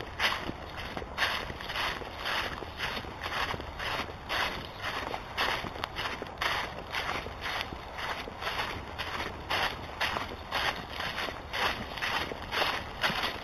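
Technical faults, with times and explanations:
Throughout, imaging from linear upsampling: dulled highs with a faint metallic shimmer at 4 to 8 kHz, about 15 dB down, where straight-line interpolation from what sounds like an 8 kHz rate mirrored the spectrum.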